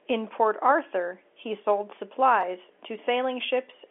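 At 2.42 s, just after "he sold", a packet loss with pitch repetition occurs: about 10 ms of audio, consistent with a single lost packet, is bridged by repeating the last pitch period, giving a brief held, slightly buzzy quality over the narrowband telephone line.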